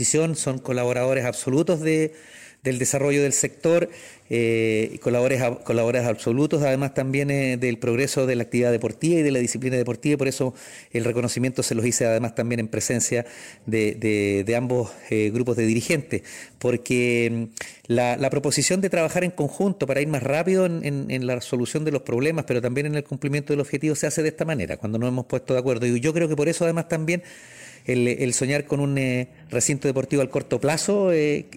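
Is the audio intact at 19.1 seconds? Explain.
Yes, at 19.1 seconds the audio is intact, with nothing there that breaks, skips or distorts the sound.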